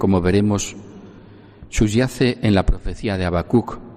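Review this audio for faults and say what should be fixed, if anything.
Nothing in the signal calls for correction: no dropouts, level problems, distortion or timing disturbances can be heard anywhere in the audio.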